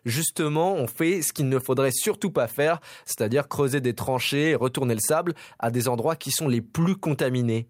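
No technical faults are audible.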